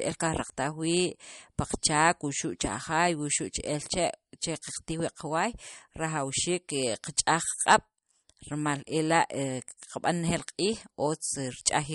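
From start to finish the speech sounds watery and swirly, with metallic chirps on s sounds and nothing above 11.2 kHz. That points to likely MP3 compression at a starved bitrate, perhaps around 48 kbps, cutting the treble and toggling weak frequency lines frame by frame.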